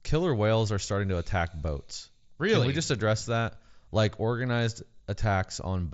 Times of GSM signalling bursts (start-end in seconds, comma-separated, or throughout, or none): none